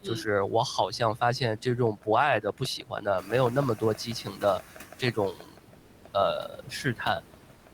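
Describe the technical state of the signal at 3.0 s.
At 3.0 s the noise suppressor is cutting into the speech. From 2.78 to 3.32 s it takes part of the speech for steady noise and lowers it along with the background, by up to about 17 dB. Roughly a third of a second sounds swallowed and faint.

Noise suppressor artifacts run through the whole clip and are present here too. The suppressor turns down the bands it judges to be noise by about 18 dB, frame by frame. The room noise, which rises around this moment, sinks and swells under the speech.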